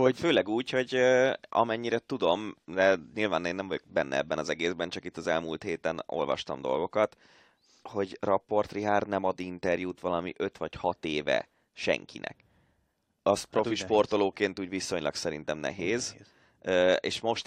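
No technical faults are audible.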